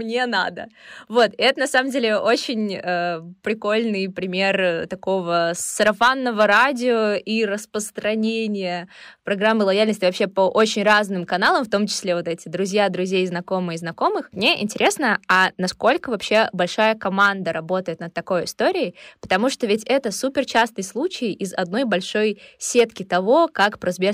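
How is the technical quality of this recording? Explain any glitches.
The recording has one technical flaw running through all of it: the speech is hard clipped.

Hard clipping appears on loud syllables throughout. The signal was driven about 4 dB past what a stage in the chain could pass, so the tallest peaks are sliced flat. Only a small fraction of samples, well under one percent, hit the ceiling, so the damage is brief crackle on emphatic peaks rather than constant fuzz. Those abrupt flat tops add high harmonics. Soft saturation or limiting would round the peaks and sound warmer, not spiky.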